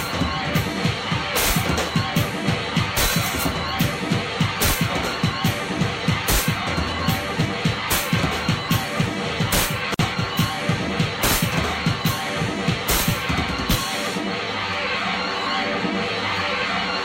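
Separately encoded pieces were joined untrimmed, leaving a gap at a join of encoded pieces: at 9.94 s, continuous sound drops out for about 50 ms, then resumes.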